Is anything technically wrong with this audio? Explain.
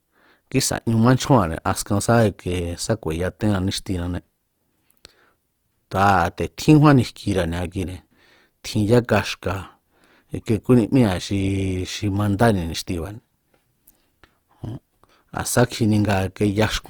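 Yes. Throughout, the speech shows plainly audible Opus compression, likely from a CELT-mode encode around 24 kbps. Starved bands are refilled with folded or noise content, making voiced sounds rough and grainy, though bandwidth extends to 20.4 kHz.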